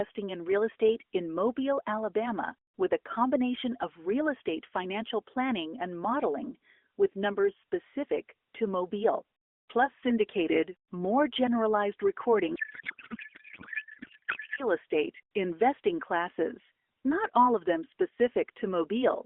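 A codec payload misread runs from 12.56 to 14.63 s in this narrowband speech recording, where the speech turns into garbled noise and warble that barely tracks it. That fits octet-aligned AMR frames being unpacked as bandwidth-efficient, so the decoder finds each field at the wrong bit position. The AMR narrowband mobile codec carrying the call is heard in the band of roughly 250 Hz to 3.5 kHz, with light coding damage.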